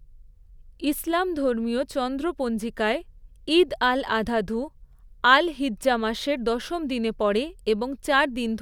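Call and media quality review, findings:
No audible faults found in this speech recording.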